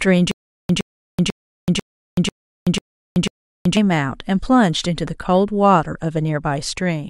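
From 0.31 to 3.77 s there's a stutter with silent gaps: a 114 ms burst repeats seven times, each followed by about 379 ms of dead silence, likely a stalled stream.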